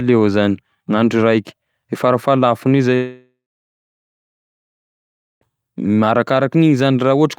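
At 2.95 s the speech just drops out, and it doesn't come back until 5.44 s. That's a long network dropout, most likely a stretch where packets stopped arriving. The receiver carries the last sound forward as a fading buzz for a moment, then you get roughly two seconds of dead silence. When the audio picks up again, about 2.5 s of the original is simply gone.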